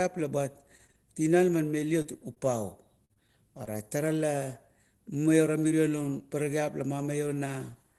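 At 0.87 to 0.91 s there is a short stall from a late packet. The packet arrived behind schedule, the jitter buffer ran dry, and the receiver held the last sound for about 17 ms. Nothing is lost. Playback resumes from the same point. The delay grows by about 17 ms from here on. The held sound lingers a touch too long, with a faint buzz or a slight dip in level.

At 2.02 to 2.06 s comes a short concealed packet loss. About 20 ms of speech never reached the decoder. The receiver patched it with about 24 ms of sound extended from what came before. It then blended back into the real audio. A second one follows at 2.34 to 2.45 s. There another 20 ms is lost and covered by 18 ms of fill. The timeline stretches by a few milliseconds. Each is heard as a brief smear or wobble, and a short consonant may drop out.

From 3.05 to 3.68 s there is repeated packet loss, and it sounds robotic. Four gaps fall in this span, with about 80 ms missing in total. 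The longest gap is 45 ms. Concealment fills about 95 ms, roughly 15% of the span. Each patch continues the previous sound, and the next hole arrives before the sound recovers. The result is choppy speech with pieces missing. Throughout, the Opus call path at 20 kbps limits the top end to about 12 kHz.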